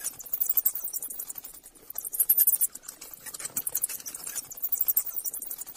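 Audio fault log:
2.51 to 2.57 s, compressed frames skipped: about 50 ms of the sound just goes missing here, and it feels like the audio hops forward a notch instead of cutting cleanly. That jump fits a single whole frame of roughly 46 ms that either wasn't in the file or got thrown out by the decoder as damaged.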